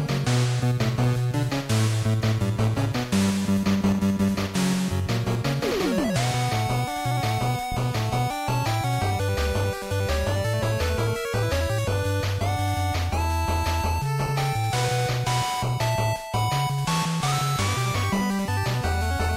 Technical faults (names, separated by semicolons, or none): loud pop